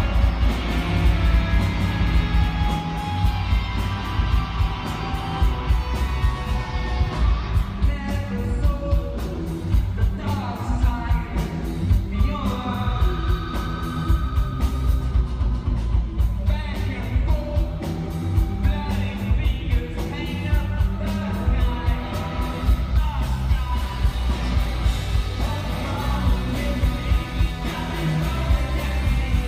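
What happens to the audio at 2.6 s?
At 2.6 s a doubled audio track is still running: an equally loud copy trails about a fifth of a second behind, likely from a second, slower capture path. It has been present since the clip opens and cuts off abruptly at 2.8 s. Unlike an echo, it carries no decay or room colour.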